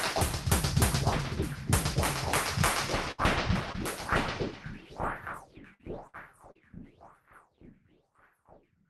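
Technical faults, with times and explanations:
3.11 to 3.20 s, 5.74 to 5.81 s and 6.07 to 6.16 s, burst of packet loss: each time roughly 60 ms of audio failed to arrive, and the receiver extended the last sound for 68, 52 and 63 ms, turning it down as it went. This is heard as a held buzz or fading hiss, followed by a jump forward. On a spectrogram the partials freeze into flat horizontal streaks that dim, then fresh detail starts abruptly; the waveform envelope decays, then snaps back.
3.72 to 3.76 s and 6.52 to 6.57 s, short concealed packet loss: about 20 ms and then 40 ms went missing, patched with 18 and 34 ms of synthesized continuation blended back into the real signal. The result is a brief smear or wobble, and any short transient there can vanish. A spectrogram shows a thin blurred vertical strip where fine texture smooths out, and the waveform shows a small repeated, slightly softened cycle pattern before normal variation returns.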